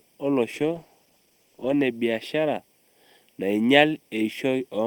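Throughout the speech, a channel delay (comb filtering) of a fraction of a millisecond between the summed channels leaves fixed notches from around 1.5 kHz upward, giving a hollow, phasey colour. From 0.55 to 1.85 s, a call bitrate drop makes the audio coarser, watery and duller for about 1.2 s, consistent with the encoder falling from roughly 32 to 15 kbps.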